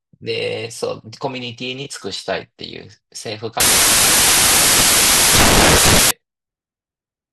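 From 3.60 s to 6.11 s the speech collapses into loud white noise, a case of samples built from the wrong bytes. Each sample was assembled with misordered or misaligned bytes, so the rapidly varying low bits dominate the values.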